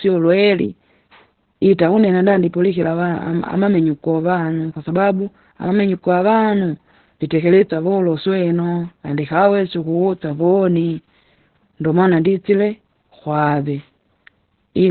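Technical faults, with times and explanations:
Throughout: Opus voice compression, heavy. The SILK coder in narrowband mode leaves nothing above about 4.4 kHz, so the speech is muffled. Coarse excitation coding at what sounds like a very low bitrate, around 8 kbps, makes it hoarse and slightly robotic.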